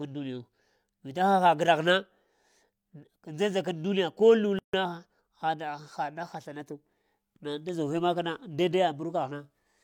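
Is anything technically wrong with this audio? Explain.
Yes. From 4.59 to 4.74 s the speech drops into a silence of about 147 ms, with edges smeared by the codec, and then resumes exactly where it stopped. This is a gap at a join of encoded pieces: the audio was encoded in separate parts and spliced without trimming, so the encoder's start-up delay and its last-frame padding both remain at the seam, leaving a short hole in otherwise continuous sound.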